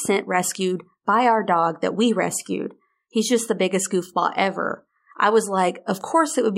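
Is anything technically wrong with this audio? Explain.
No, there's nothing technically wrong with this speech recording that a listener would pick up on.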